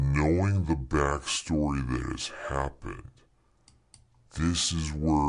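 From start to finish, the speech has a wrong sample rate fault. Everything runs at about two thirds of its proper speed. Pitch drops by about 7 semitones, close to a musical fifth. Speed and pitch fall together by the same ratio. That points to samples played back at a lower rate than they were recorded at, with no conversion. A 48 kHz recording played at 32 kHz fits. Voices sound deep, slow and dragged.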